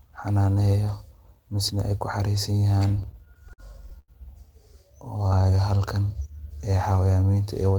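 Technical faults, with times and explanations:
2.83–4.11 s, repeated stalls (stutter): the speech keeps halting as packets arrive late and the jitter buffer runs dry twelve times in a little over a second. Each gap is bridged by continuing the last sound, the longest about 90 ms, so roughly a fifth of that span is filled-in audio, with nothing lost. On a spectrogram the harmonics flatten into short repeated smears; the waveform shows copied cycles, some fading in amplitude, giving a dragging, stuttering rhythm.
5.18–5.58 s, jitter buffer slow-down: the receiver builds up its reserve by repeating single pitch periods and fragments of pauses, adding about 72 ms and playing this stretch at 84% speed with the pitch unchanged. The sounds come out drawn-out. On a spectrogram the harmonics stay at the same frequencies but stretch horizontally; the waveform shows runs of near-identical periods laid end to end.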